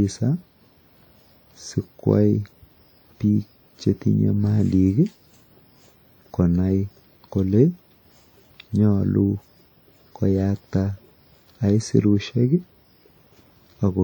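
From start to finish, the speech carries ringing, washy smearing and a hiss that breathes with the signal. The likely cause is WMA compression, consistent with about 48 kbps. Its transform blocks spread quantisation noise over tens of milliseconds, though content still reaches about 20.1 kHz.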